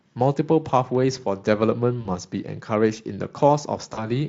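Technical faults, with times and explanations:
2.01–2.07 s and 3.93–4.07 s, VoIP packet loss concealed by the speech codec: the speech briefly smears into a buzzy, fading tone, then comes back weak before recovering, longer at the second spot. Each time about 40 ms of audio went missing, which fits two 20 ms frames. The Speex decoder filled the gap by repeating its last pitch and filter at falling gain, and because each frame builds on the previous one, the damage lingers past the gap itself.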